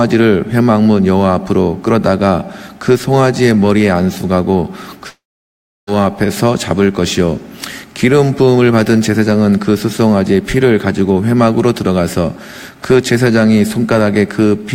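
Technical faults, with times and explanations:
5.09–5.89 s, long network dropout: the audio breaks off for about 0.8 s. The last sound before the gap carries on briefly as a fading buzz, then gives way to silence for roughly 0.68 s, and the audio resumes at 5.89 s with that stretch simply gone. This is likely a run of lost packets, with the receiver extending the final fragment it had until that concealment ran out, leaving only silence until new data arrived.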